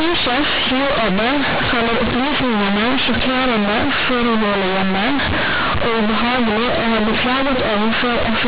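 Companded audio read as linear, throughout: A-law bytes play as raw 8-bit samples without expansion, so speech becomes loud, buzzy distortion and pauses fill with noise.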